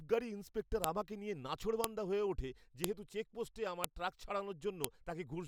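File header played as audio: sharp, loud clicks land at 0.84, 1.84, 2.84, 3.84 and 4.84 s in this speech clip, exactly one second apart. The audio was evidently assembled from 1-second WAV pieces joined or streamed with each piece's header left in place, so those few dozen bytes of metadata are decoded as sample values. That produces a brief snap at every piece boundary, regardless of what the speech is doing there.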